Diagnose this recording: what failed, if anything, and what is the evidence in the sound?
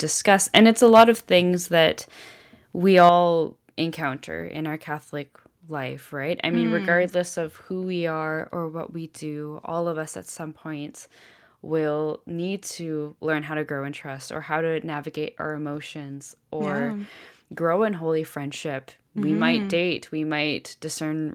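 Microphone overload at the converter, twice. From 0.56 to 1.04 s, just before "of things", the peaks run about 6 dB past full scale and get flattened, and a few percent of the samples sit pinned at the ceiling, giving that harsh, crackly edge on the loudest bits. It happens again, briefly, from 2.97 to 3.09 s, about 2 dB over, with a similar small share clipped. The likely cause is input gain set too hot, so the converter simply runs out of headroom.

Then there's a microphone volume step-down in call processing. Right at 1.02 s, just before "of things", the whole level, background included, drops by about 2 dB in one go, and at 3.09 s it drops again by about 5 dB. Each step lands right at the tail of a clipped stretch, which points to the likely cause: the call software's gain control spotting the overload and lowering the device's input volume in a single jump rather than a gradual ramp.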